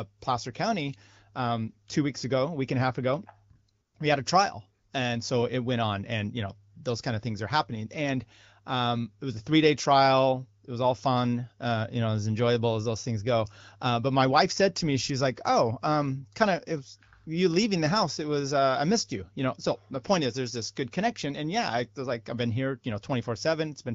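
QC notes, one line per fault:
No faults to note for this speech clip.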